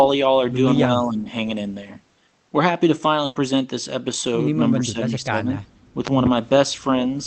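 From 0.86 to 1.28 s, and again from 4.75 to 5.46 s, the speech dips by roughly 10 dB and thins in patches. This is speech suppressed in double talk, likely the echo canceller turning down the near talker while the far side also spoke. Unlike a packet loss, nothing is skipped.

At 3.25 to 3.37 s a burst of packet loss leaves about 100 ms concealed by stretching and fading the previous sound, and then the speech resumes with about 100 ms missing. That jump forward in time is what separates it from suppression.

From 5.74 to 5.83 s, background gated by the echo canceller pulls the room sound down by about 14 dB for a brief moment. It affects the ambience rather than the speech itself.

Between 6.07 and 6.29 s, two loud pops stand roughly 15 dB above the signal, with the speech carrying on underneath. Their sharp, added character points to a transient such as a plug, switch or static discharge, not a dropout. 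Through the whole clip, the Opus call path limits the audio to 8 kHz.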